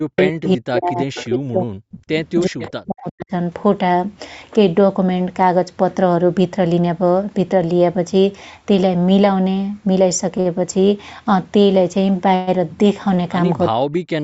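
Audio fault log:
0.0–2.15 s, 2.46–3.32 s and 13.7–14.23 s: speech suppressed in double talk. The voice repeatedly drops by up to about 40 dB. Roughly 1.5 s of the first stretch is affected and about 0.7 s of the second. The likely cause is the echo canceller turning down both sides while the far end was also talking. On the waveform the envelope collapses abruptly. On a spectrogram the energy shows gaps.
0.18–0.22 s, 1.15–1.26 s and 2.59–2.68 s: echo leak. Faint, brief repeats of the voice arrive about 370 ms after the original, about 15 to 20 dB below the speech. This is likely residue the echo canceller failed to remove. On a spectrogram they appear as weak copies of earlier harmonic patterns, shifted later by that delay.
10.40–10.47 s and 13.15–13.19 s: short stall from a late packet. The jitter buffer ran empty while a packet was late, so the receiver held the last sound for 49 ms and then 22 ms. 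Playback then continued from the same point with nothing lost. The spectrogram shows short horizontally smeared, frozen bands. The waveform shows a repeated cycle that sags slightly.
12.35–12.49 s: call audio freeze. The sound hangs for 120 ms as a fading buzz, then resumes where it stopped, with nothing missing. Packets were likely held up in transit and the receiver filled the wait. On a spectrogram this is a stretched, decaying smear. The waveform tapers off, then restarts at full level.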